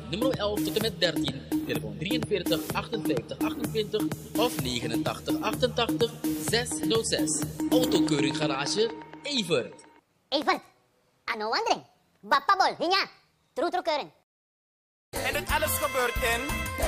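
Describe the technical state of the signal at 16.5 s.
At 16.5 s the signal is intact, with no dropout, distortion, glitch or other fault to be heard.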